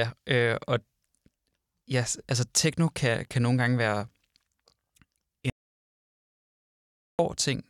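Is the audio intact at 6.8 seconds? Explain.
No. An audio dropout to silence runs from 5.50 s to 7.19 s, so 6.8 s falls inside a stretch of silence about 1.69 s long. The input was likely lost, through a disconnected device, a broken link or an accidental mute, while recording carried on. The speech stops abruptly at 5.50 s, with no room tone at all underneath, and resumes suddenly at 7.19 s; whatever was said during that gap is gone.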